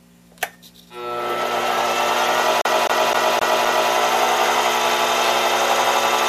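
At 2.61 s the audio gets caught in a CD stuck on one turn, a scratch kicking the laser back a track each rotation. The same 0.26 s snippet plays five times, with a tiny mute at every jump, until it breaks free at 3.91 s.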